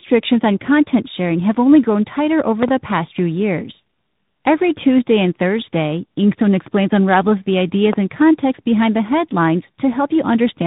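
Right through the speech there's tandem speech coding: it's been squeezed through two narrowband coders back to back, probably AMR-NB then G.726. It's rough, warbly, and empty above 3.8 kHz. Around 2.63 to 2.70 s there's a loud pop, two quick clicks about 20 dB over the speech. Another single loud pop lands at 7.93 to 7.95 s, roughly 15 dB up. Both are likely electrical spikes from a plug or switch.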